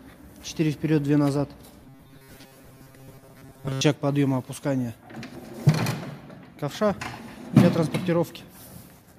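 From 1.84 to 3.81 s the sound turns into a rigid, metallic buzz fixed at 134 Hz. This is robotic sound, likely from repeated short buffers. A slice of about 7.5 ms loops while most of the real audio is skipped.

At 5.35 to 5.55 s, and again at 7.18 to 7.38 s, frames play out of order. Two neighbouring blocks of about 93 ms swap places, which fits four-frame runs. Each stretch sounds like a garbled flutter.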